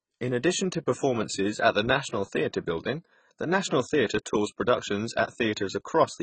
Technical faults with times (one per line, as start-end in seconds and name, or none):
0.00-6.22 AAC compression